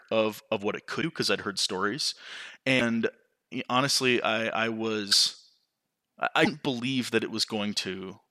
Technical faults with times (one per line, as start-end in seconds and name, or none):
1.01-1.04 broken MP3 bit reservoir
2.78-2.82 broken MP3 bit reservoir
5.11-5.13 broken MP3 bit reservoir
6.44-6.47 broken MP3 bit reservoir